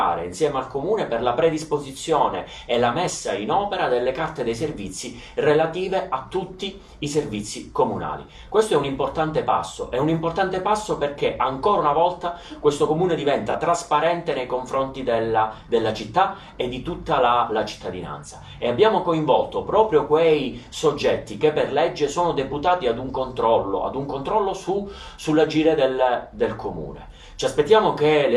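At 13.49 to 13.55 s there is AAC frame loss with concealment: a brief stretch, consistent with a single lost frame, was rebuilt from the preceding spectrum. It sounds smeared and noisy rather than silent, which separates it from a plain dropout or gap.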